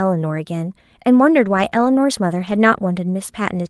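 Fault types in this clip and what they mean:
lost packet rebuilt from error correction: lost packets replayed from rougher low-bitrate backup copies at 1.41–1.67, 1.73–1.87 and 2.39–2.57 s, showing as grainier, noisier spectrogram texture without gaps.
short concealed packet loss: about 20 ms missing near 1.69–1.73 s, filled by extending the preceding sound; a brief smear, with a blurred repeated patch on the spectrogram and a seam in the waveform.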